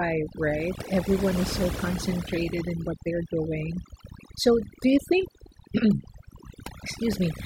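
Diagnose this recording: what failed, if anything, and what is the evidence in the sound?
The background drops to near silence scattered with twinkling specks for the whole clip. This is overdone noise removal at the processing stage: suppression set too hard mutes individual frequency bands near its noise estimate, taking quiet speech detail with them.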